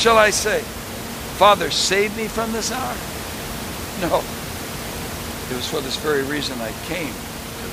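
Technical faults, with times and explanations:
No technical faults are present, so there are no times or explanations to give.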